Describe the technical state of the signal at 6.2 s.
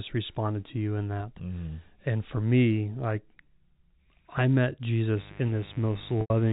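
Mains buzz is present at 6.2 s. It enters just after "I met" at 5.17 s and continues to the end. A 50 Hz interference source adds switching spikes twice per cycle, producing a steady raspy buzz roughly 20 dB below the speech. A spectrogram shows evenly spaced horizontal harmonic lines reaching into the kilohertz range.

Packet loss with pitch repetition also occurs during the buzz, from 6.21 to 6.30 s. Audio is missing for about 90 ms, a gap consistent with three lost packets. The receiver loops the last pitch period, fading it out over about 50 ms into silence. The waveform shows identical repeating cycles decaying toward silence, then a short cross-fade back into the speech.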